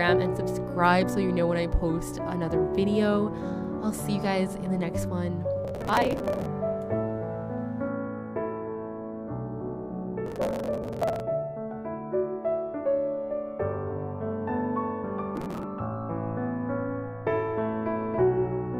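The audio has three bursts of processor overload crackle. They run from 5.65 to 6.46 s, from 10.26 to 11.2 s, and from 15.36 to 15.64 s. Each is a gritty tearing laid over the sound. The processor missed its deadlines many times in a row. Each missed buffer was skipped, leaving a short hard-edged gap. The spacing fits buffers of about 5 ms. The crackle stops when the load eases.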